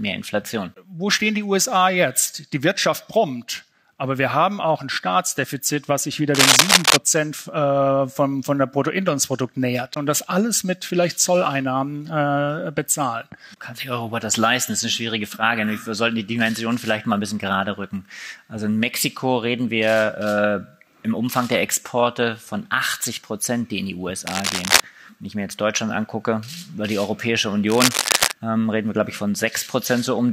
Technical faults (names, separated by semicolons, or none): cable scratch noise